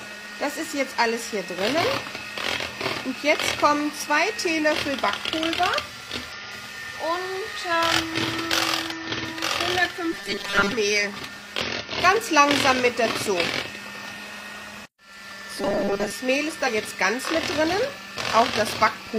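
Damaged data in a compressed stream causes short blips at 6.32 to 6.35 s and at 8.92 s. At each point the decoder misreads corrupted bytes, loses frame sync and hunts for the next header. Each is heard as a brief glitch.

From 10.13 to 10.72 s the sound turns rigid and metallic. This is robotic sound from repeated short buffers. A fixed 200 Hz buzz sits over the audio. That points to about 5 ms chunks being replayed in place of most of the real audio, likely because new data arrived too slowly.

Another corruption glitch follows at 11.61 to 11.66 s. The robotic buzz returns from 15.61 to 16.12 s, again at 200 Hz. A final glitch from damaged stream data lands at 16.63 to 16.69 s.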